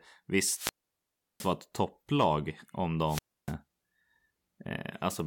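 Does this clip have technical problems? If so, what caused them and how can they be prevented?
Yes. The speech drops out twice with a wireless microphone squelch dropout: a short surge of hiss, then a hole of near silence, then the voice returns. The first runs from 0.49 to 1.55 s, with about 0.71 s muted, just before "ett topplag om". The second runs from 3.06 to 3.54 s, with about 0.29 s muted, right after "ett topplag om". The analogue FM radio link weakened, the receiver's noise rose, and its squelch shut the output until the signal recovered. Keeping the transmitter in clear line of sight, using diversity receivers with well-placed antennas, and checking batteries and frequency coordination would prevent it.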